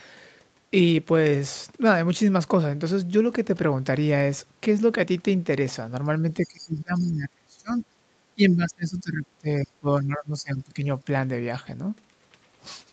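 It's a speech recording. From 6.41 to 7.82 s and again from 8.35 to 10.83 s the talker dips hard, by roughly 25 to 30 dB, likely speech suppressed in double talk. Inside the first dip, at 6.43–6.65 s and 6.96–7.03 s, faint scraps of the other side's voice leak through, roughly 20 to 30 dB down, likely from an incompletely cancelled loudspeaker echo. The top end stops around 8 kHz, which fits a wideband call path.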